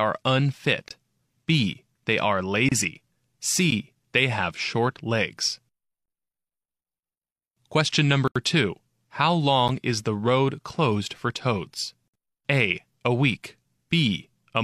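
The speech drops to digital silence six times: 0.88–0.91 s, 2.69–2.72 s, 3.71 s, 8.28–8.36 s, 9.68 s before "is the road closed", and 12.08–12.14 s after "road closed for toads". Each block of digital silence is zeroed samples, likely from an unfilled buffer. The first, 23 ms, fits a 1024-sample buffer. Short gaps tick. The 80 ms gap is a short hole.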